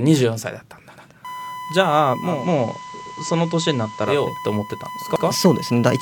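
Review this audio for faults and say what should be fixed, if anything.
Overlapping chunks are audible as a short stutter at 0.96, 3.06 and 5.16 s, a regular 2 s spacing. At each join the next block of 2 s begins before the previous one has finished, so 100 ms plays twice. A dropout would leave a gap where sound goes missing, but here the sound is replayed rather than lost, which is how the two can be told apart. To prevent it, make each block start exactly where the last one ended, with no overlap in the read or write pointers.

USB whine begins at 1.25 s and runs to the end. It is a steady 1 kHz tone sitting about 15 dB below the signal. It comes from the bus drawing current in 1 ms frames and pushing that ripple into the audio through shared power or ground. Mains hum would sit at 50 or 60 Hz and its harmonics, so the fixed 1 kHz pitch points to USB. To prevent it, use an isolated or separately powered interface, or break the ground loop.

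Digital radio blending to analogue runs from 2.23 to 4.31 s. The receiver loses the digital stream and cross-fades over about 279 ms to the FM broadcast, then fades back. During that stretch a hiss roughly 30 dB below the signal appears, while the level stays the same. A lossy codec can also cut the top, but it would not bring hiss with it or return cleanly afterwards. To prevent it, improve the digital reception or capture from a steadier source.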